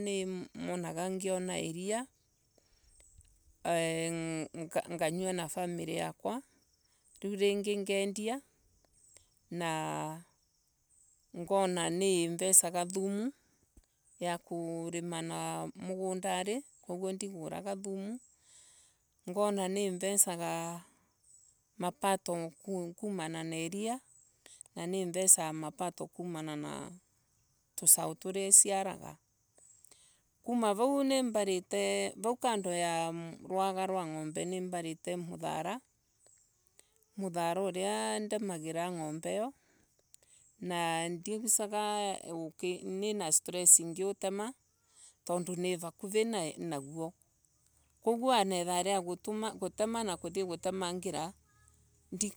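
Nothing technical goes wrong anywhere in this bit of speech, so there's no fault here to point out.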